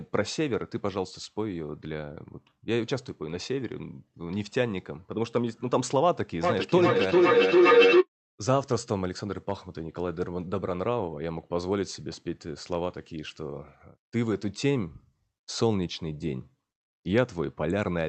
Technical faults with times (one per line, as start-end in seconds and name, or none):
6.43-8.08 feedback howl